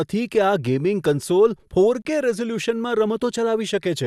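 At 2.02 s, right after "ગેમિંગ કન્સોલ", the speech drops into a 31 ms silence with smeared edges, then resumes where it stopped. This is a gap at a join of encoded pieces: separately encoded segments were spliced untrimmed, leaving encoder start delay and final-frame padding.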